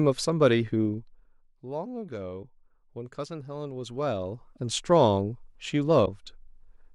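In this speech clip, a level change is applied in unsmoothed 1 dB steps, about twenty per second, causing zipper noise. From 0.81 to 1.49 s the level falls by about 15 dB, and from 3.73 to 4.80 s it rises by about 15 dB, each time with a ticking, zipping texture. The likely cause of two brief glitches, at 2.42–2.45 s and 6.05–6.08 s, is a broken MP3 bit reservoir: after frames were cut out, the following frame, roughly 26 ms long, reads the wrong borrowed data, so the sound jumps ahead with a garbled 30 ms disturbance.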